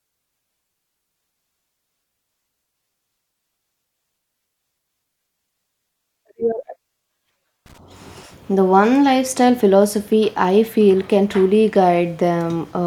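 At 7.66 s a worn or dirty contact somewhere in the analogue chain starts making and breaking as it shifts, which is loose connector crackle. For about 0.12 s, until 7.78 s, the signal path is repeatedly interrupted, so the speech is chopped into fragments, and any DC sitting on the line turns each reconnection into a pop. The result is a short, irregular burst of scratchy crackle over the voice.

At 10.45 s a single sample on a digital path has one bit flipped, a bit error spike. That one value jumps by a power of two away from where the waveform should be, reaching about -24 dBFS, and then falls straight back on the next sample. Because the step is so abrupt and has nothing to do with the speech around it, it comes out as one sharp, broadband tick.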